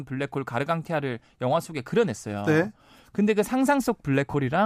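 At 4.31 s, lasting about 30 ms to 4.34 s, lost LE Audio frames break the speech. The LC3 decoder fills the gap by repeating the last spectrum with random signs. It sounds like a brief noisy smear, which fits four 7.5 ms frames.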